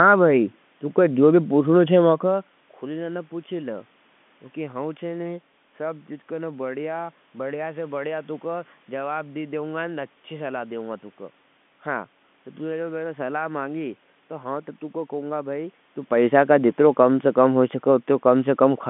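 Telephone-band speech, about 150 Hz to 3.5 kHz as carried by a G.711 line, with audible room noise and talker-movement level shifts near 2 s and 16 s, and no technical faults.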